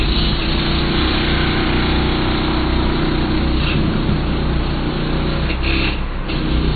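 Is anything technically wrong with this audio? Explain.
Yes. Throughout, the audio shows MP3 compression damage: nothing above 4.5 kHz, with weak frequency lines dropping in and out between frames, giving a watery, swirly texture, likely from a low bitrate around 24 kbps.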